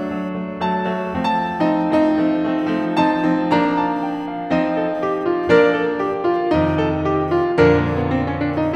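Computer activity noise runs through the whole music track: a faint buzzing chirp, pulsing roughly a thousand times per second and about 45 dB below the music, as the computer's load changes disturb the audio ground. A spectrogram shows faint horizontal lines near 1 kHz and its multiples, too small to see in the waveform.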